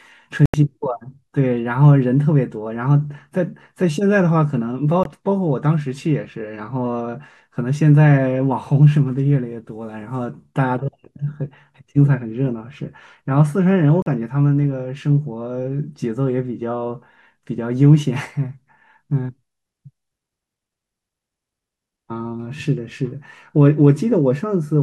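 The speech cuts to silence at 0.46 to 0.54 s, 5.03 to 5.06 s and 14.02 to 14.06 s. The edges are abrupt or fade over a few milliseconds. The gaps last about 80, 20 and 40 ms. Each resumes further on, as if playback continued. These are likely Bluetooth dropouts from late, discarded packets.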